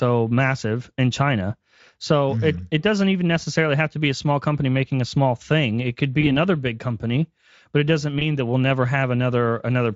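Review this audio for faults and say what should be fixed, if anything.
VoIP packet loss concealed by the speech codec occurs at 6.21–6.36 s, just before "big company but it", and at 8.19–8.26 s, between "company but it doesn't" and "that we'll never". Each gap fits one lost 20 ms frame. The decoder filled it by extending the previous pitch and filter at falling gain, so the speech turns briefly buzzy or noisy and thin and recovers only gradually. The light Speex coding around it is not at fault. Adding jitter buffering and forward error correction on the network path would prevent these losses.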